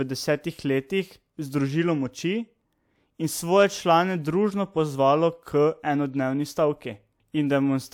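No technical faults can be heard in this recording.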